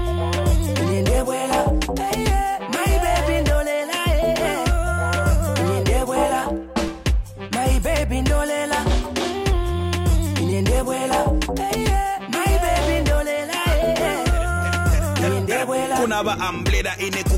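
A low thump sounds at 6.88 s and again at 9.69 s, each a DC step where the waveform's zero line jumps by about -21 dBFS and then decays away through a 20 Hz high-pass, while the sound itself carries on unchanged.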